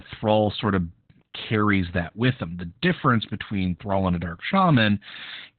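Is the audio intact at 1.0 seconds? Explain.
No. At 1.0 s the speech carries Opus voice compression, as it does throughout the clip. The codec works in its narrowband SILK mode and codes the excitation coarsely. Nothing remains above 4.4 kHz. The voice sounds muffled, hoarse and slightly robotic, which fits a rate near 8 kbps.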